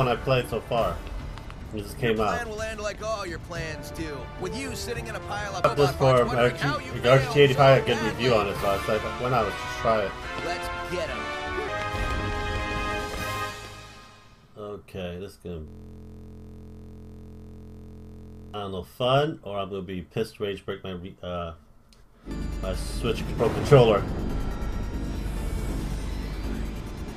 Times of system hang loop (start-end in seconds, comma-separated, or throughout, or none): 15.68-18.54